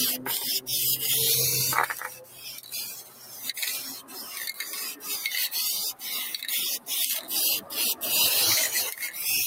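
A noise suppressor applied to music or sounds runs through the whole clip. It treats steady tones and tails as noise. Held parts sink while attacks pass. The level swings by roughly 10 dB, so the sound pumps and thins.

Sound cut by the noise suppressor comes at 1.92 to 2.74 s, 2.94 to 3.44 s and 3.96 to 4.31 s. Each dip reaches about 10 dB. Sustained and decaying parts drop away, and their tails end early.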